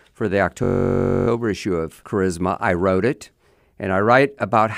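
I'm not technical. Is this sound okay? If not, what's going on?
No. At 0.64 s, just after "for the", the computer briefly froze: a system hang loop. While it was stuck, the sound hardware kept replaying the same tiny 21 ms slice of audio, which fits a 1024-sample buffer, about 47 times a second. Looping that fast turns the speech into a steady buzzing drone for about two-thirds of a second, until 1.28 s, when "issue of" picks up normally with essentially nothing missing.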